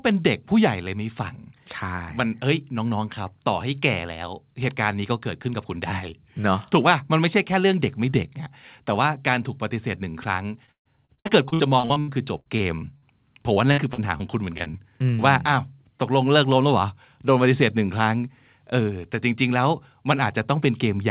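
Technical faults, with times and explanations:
10.66–13.04 s, 13.54–14.22 s, 14.58–14.80 s: repeated packet loss (robotic sound). Dropouts up to 138 ms are patched with repeated audio, sounding choppy with pieces missing. On a spectrogram, smeared, copied frames break the harmonics.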